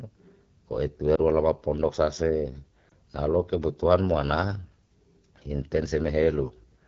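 The speech runs through the AMR wideband (HD Voice) codec at a low rate. The roughness fits the 8.85 kbit/s mode, one of its two lowest. With so few bits, the encoder can only loosely model the vocal tract and its pulse excitation below 6.4 kHz, and the band up to 7 kHz is filled with shaped noise rather than real detail. The result is speech that sounds plainly rough and raspy across the whole clip.

Lost AMR speech frames appear at 1.15 to 1.20 s and again at 2.90 to 2.92 s. Each sounds like a single 20 ms frame that failed its error check. The decoder bridged the gap by repeating the last good pitch and vocal tract settings at reduced gain. Because each gap is that short, the speech does not fade away. Each loss comes through as a brief dip or warble, and the following moment returns weak or rough.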